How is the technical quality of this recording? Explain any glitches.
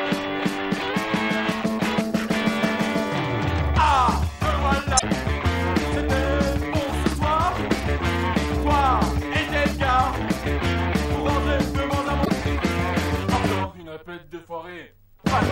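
Two short glitches break up the recording. At 4.95 to 5.03 s and again at 12.21 to 12.30 s, a brief chirp or squawk of about 80 ms cuts through the sound. Both come from damaged data in a compressed stream: corrupted bytes caused the decoder to misread frames and lose sync until it found the next valid frame header.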